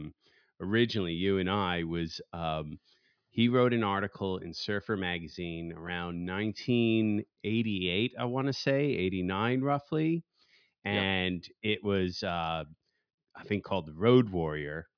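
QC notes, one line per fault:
Nothing to flag on this one, the speech comes across without any technical problems worth noting.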